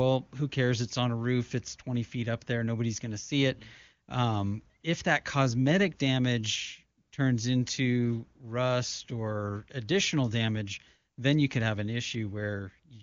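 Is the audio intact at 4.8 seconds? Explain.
No, AMR comfort noise fills 4.81 to 4.83 s, just before "if that cosmetic damage": speech frames stopped for 20 ms and synthetic steady noise briefly replaced the real background.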